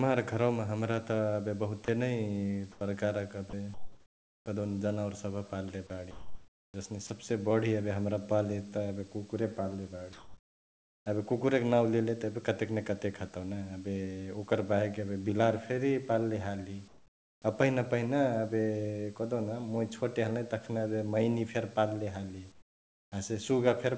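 At 1.85 s a 30 ms stretch of the speech drops out and is replaced by a flat hiss. This is sound dropped by the voice detector, most likely because the sender's detector misjudged a soft fragment as background, stopped transmitting, and the receiver filled the gap. From 2.72 to 4.46 s, in the pause before "कहदेउन जनावर सभ पाल्ले", the room background turns into comfort noise in place of the background, a smooth, detail-free hiss lasting about 840 ms of the span. Inside that stretch, at 3.50 s, comes another 30 ms drop. Comfort noise takes over again from 6.11 to 7.10 s. Right at its end, at 7.07 s, a third 30 ms drop comes just before "बढी एबे हमरा पाल्ले".

The drops differ from the comfort-noise pauses because actual sound goes missing. They are tiny bites out of the sound, heard as a brief gap of steady noise rather than as a change in the pause. The comfort noise only swaps the real background for synthetic hiss. 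The likely mechanism is discontinuous transmission: in pauses the sender stops sending and the receiver synthesises noise roughly matched to the background, which sits about 32 dB below the loud speech.

Later pauses show the same swap, each time quieter than the real room noise. The first runs from 10.13 to 11.06 s, between "एबे कुकुरे पाल्ले" and "एबे कुकुरैक नांउ लेले", and is about 3 dB down. The second, from 16.88 to 17.42 s, is about 8 dB down. The third, from 22.52 to 23.12 s, is about 14 dB down. That makes the background seem to dip and then snap back when the speech resumes. Throughout, the audio carries nothing above 8 kHz, which fits the G.722 call path at 64 kbps.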